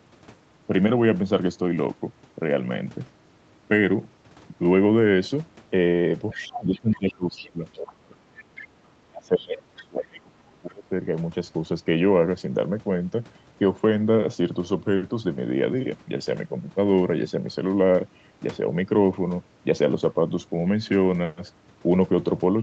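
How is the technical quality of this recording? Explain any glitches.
The recording has two clustered problems between about 6.3 and 10.9 s, where a second voice bleeds in and the main speech dips; the audio is band-limited to 8 kHz from the Opus call path.

Other side's voice leaking through, from 6.3 to 7.79 s, 8.38 to 8.65 s and 9.38 to 9.79 s: a faint second voice, roughly 20 dB under the speech, likely loudspeaker echo the canceller missed.

Speech suppressed in double talk, from 6.33 to 8.35 s and 9.1 to 10.92 s: the talker sinks by about 25 to 30 dB, likely the canceller ducking everything during overlap.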